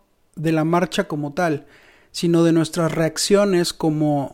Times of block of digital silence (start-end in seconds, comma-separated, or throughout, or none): none